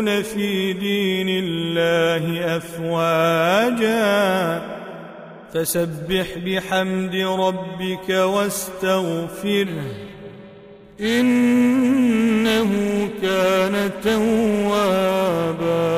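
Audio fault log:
9.66 to 15.98 s, periodic clock jitter. From 9.66 s to the end, the sound takes on a rough, metallic edge. The converter's sampling clock is being shaken at a steady rate of around 400 Hz. That timing wobble puts sidebands above and below every component, spaced about 400 Hz away. Higher-pitched content suffers most, since a given timing error shifts fast waveforms further. In quiet gaps the edge vanishes, because silence has nothing to modulate.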